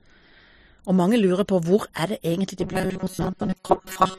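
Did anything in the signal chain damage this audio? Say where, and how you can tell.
Yes, at the driver or buffer stage. From 2.60 s, after "det egentlig", to the end, speech becomes a rigid 188 Hz buzz. This robotic sound from repeated short buffers likely comes from starved buffers looping about 5 ms chunks, so most of the sound repeats.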